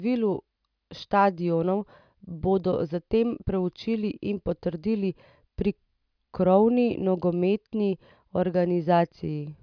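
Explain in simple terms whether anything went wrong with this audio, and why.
Nothing went wrong with this audio, because no fault can be heard anywhere in it.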